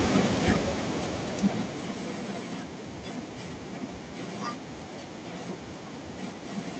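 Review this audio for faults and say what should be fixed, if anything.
Automatic gain falling from 0.05 to 2.62 s: the gain control judged the opening input too loud, or its background noise too strong, and gradually pulled it down by about 15 dB, so the speech and its background sink together. To prevent it, set a sensible input level before recording so the gain control starts near its target instead of correcting mid-clip.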